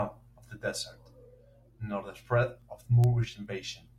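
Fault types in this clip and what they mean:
Word clock ticks: a digital link here is being read by a device running on its own clock rather than locked to the sender's, so every time the two clocks slip past each other a sample gets dropped or doubled and you hear a tick. In this speech clip they run from about 0.52 s to 3.88 s, around ten of them, roughly every 0.4 s, which points to the clocks being something like 50 ppm apart.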